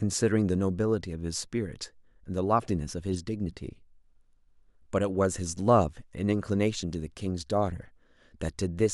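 A short chirp-like burst cuts into the speech from 3.14 to 3.18 s, peaking around -30 dBFS. It is a corrupt frame decoded: damaged bits across a few compressed frames were played, misplacing energy in frequency.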